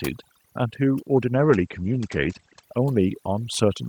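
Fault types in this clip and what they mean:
Overdone noise removal: A noise reduction stage was pushed too hard, and it affects the whole clip. It suppresses individual frequency bands whenever they sit close to its idea of the noise. Quieter parts of the speech get removed along with the noise. Between phrases the background drops away, with small twinkling specks left behind.
Automatic gain rising: The gain control judged the input too quiet and began raising its level at about 0.41 s. The increase is gradual, not a jump. It keeps climbing until the end of the clip. Voice and background grow louder together, so the speech seems to swell forward. The residue left by the noise removal rises with it.
Call bitrate drop: From about 1.38 s to 2.69 s the encoder was given far fewer bits. The sound suggests a fall from roughly 32 kbps to about 13 kbps. The low point lasts around 1.2 s. The audio band shrinks from about 20 kHz to about 8 kHz, so the top end disappears and the speech turns muffled. 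The coarser coding adds a rough, watery edge until quality recovers near 2.69 s.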